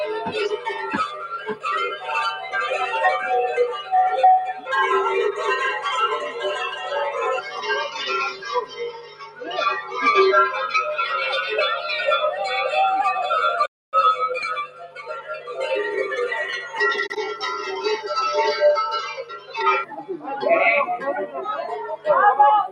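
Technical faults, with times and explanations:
Throughout: noise suppressor applied to music or sounds. A speech-tuned suppressor treats sustained parts as noise. Level swings by about 10 dB, so the sound pumps and thins.
0.54–0.69, 1.08–1.65, 1.92–2.10, 6.74–6.92, 7.41–7.64, 8.31–9.52, 14.66–15.65 and 19.13–19.55 s: sound cut by the noise suppressor. Held or decaying passages sink by about 6 to 13 dB, deepest in the longer stretches.
13.66–13.93 s: playback stall. Output drops to silence for about 0.27 s, then resumes. The player likely ran short of data or was briefly blocked.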